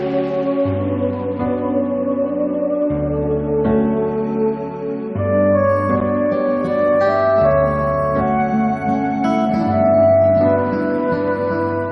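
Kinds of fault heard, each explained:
Gap between stream segments: two segments' time stamps leave a hole, filled with silence. A hard-edged 9.8 ms silence cuts the sound at 6.00 s.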